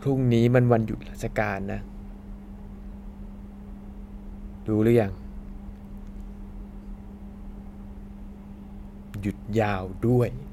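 No technical faults can be heard anywhere in the recording, and the signal holds steady throughout.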